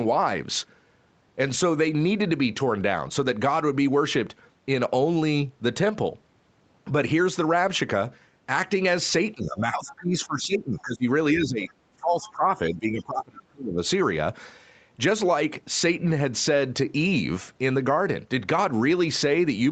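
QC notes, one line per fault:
9.35–11.06, 11.33–11.71, 11.96–12.44 and 12.70–13.80 s, speech suppressed in double talk: The speech sinks and breaks up in pieces, by roughly 15 to 30 dB, deepest at the last run. Both ends likely talked at once, so the echo canceller ducked the near talker.
10.77–10.82 and 12.25–12.30 s, other side's voice leaking through: Brief scraps of a second voice slip in, some 25 to 35 dB under the speech. Likely the far side's loudspeaker sound reached the microphone and escaped the echo canceller.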